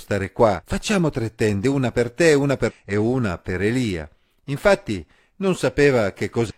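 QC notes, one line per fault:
0.56–0.63 s, 2.65–2.72 s and 6.46–6.51 s, damaged data in a compressed stream: bad bytes in the compressed speech stream make the decoder misread frames, lose sync and hunt for the next header, so each spot gives a brief glitch of roughly 60 ms.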